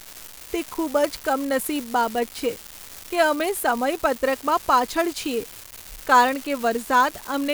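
From the first moment to the last, there's an unreliable data bit: one marginal line keeps flipping its bit at random, so identical-sized spikes land scattered through the speech. You get a constant crackly fizz that carries straight on through the pauses.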